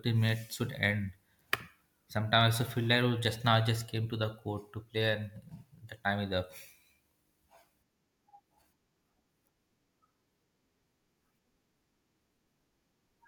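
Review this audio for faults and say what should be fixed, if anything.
No faults found in the speech; nothing to fix.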